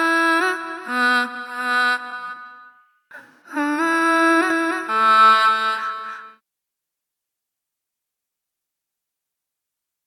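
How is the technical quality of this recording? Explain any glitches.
The recording has one clear fault. From 4.50 s to the end, a doubled audio track appears, likely from a second, slower capture path mixing the same sound back in. A dry copy about 5 dB quieter trails roughly 300 ms behind, cutting in abruptly.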